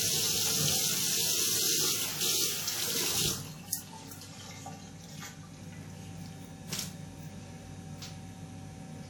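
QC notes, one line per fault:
Throughout – WMA compression: the whole clip has a ringing, washy smear with a hiss that swells and sinks with the sound itself, and the damage is plainly audible. This is likely a transform codec like WMA working with long blocks, so quantisation noise spreads over tens of milliseconds around each event and quiet detail gets dropped. The strength of it fits a low bitrate of around 48 kbps. There's nothing above 19.9 kHz.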